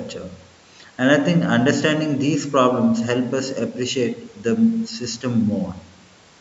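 No technical faults can be heard in this speech. It carries the marks of a call's microphone processing, with the lowest bass trimmed, which is how that path normally sounds.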